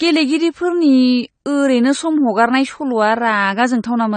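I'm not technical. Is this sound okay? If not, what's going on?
No. Throughout the speech there is an audible dulling and a watery, fizzy smear on held sounds and hissy consonants, and nothing is heard above 9 kHz. This is most likely AAC compression, a data-saving format squeezed too hard, which throws away detail it judges less audible. A muffled microphone or simple treble cut would also sound dull, but it wouldn't add that shimmering, bubbly texture.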